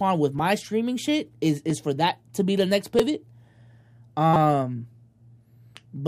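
Brief clicks at 0.39, 1.70 and 2.99 s and a short buzz from 4.34 to 4.36 s are repeated buffers: late audio made the device replay a 5.8 ms block, which fits a 256-sample buffer.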